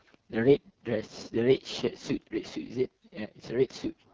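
Throughout, the speech has been squeezed through the AMR wideband (HD Voice) codec at a starved rate, and the heavy damage fits its lowest 6.6 kbit/s mode. Its pulse-driven vocal tract model runs short of bits, so the speech sounds rough and raspy.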